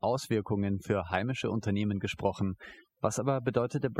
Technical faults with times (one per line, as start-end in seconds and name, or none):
0.00-3.99 overdone noise removal